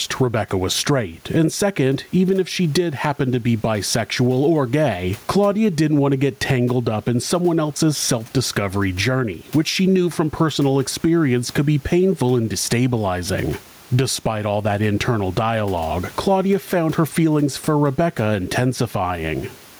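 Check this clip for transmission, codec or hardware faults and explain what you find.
One fault runs through the whole clip: gain pumping. The room noise sits about 36 dB below the speech, and the gain swings by around 10 dB, pulled down under every loud syllable, likely from excessive microphone gain driving a fast limiter. On a waveform the peaks look flattened.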